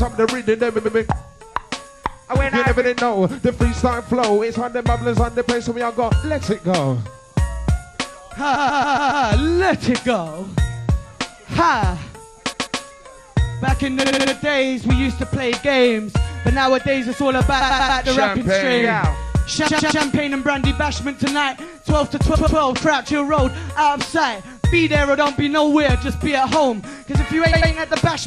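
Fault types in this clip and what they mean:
Repeated frames: A short run of compressed frames is decoded more than once, so the sound stutters. Eight times, from 0.77 s to 27.5 s, a block of 70 to 140 ms replays two to five extra times. Each event adds 0.19 to 0.70 s.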